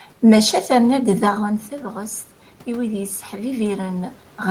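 Speech, and from about 0.9 s to 4.19 s you can hear automatic gain rising: the talker drifts roughly 13 dB quieter around 1 s, so the AGC slowly pushes its gain up about 6 dB, and the voice and room noise swell together.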